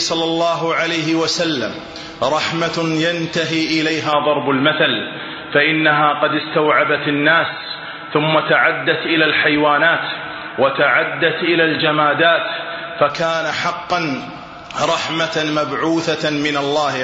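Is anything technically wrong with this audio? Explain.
Yes. From 4.13 s to 13.10 s the sound turns dull and boxy, with nothing above 4 kHz, a level shift of roughly 5 dB and a faint new noise floor, then clears again. This likely comes from the input switching to a poorer device with a narrower band.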